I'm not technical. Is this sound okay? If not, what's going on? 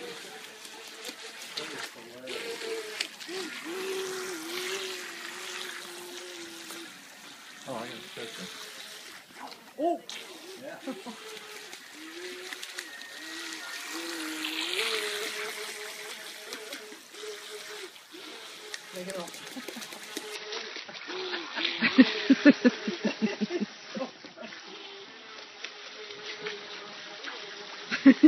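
No. From about 20.35 s to the end, the sound suddenly turns dull and watery, with nothing above 6 kHz and no gap. This is an adaptive stream at a lower bitrate: the connection slowed, so the player switched to a smaller, lower-quality copy.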